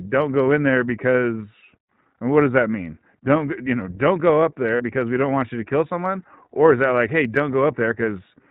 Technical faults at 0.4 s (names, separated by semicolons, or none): iLBC codec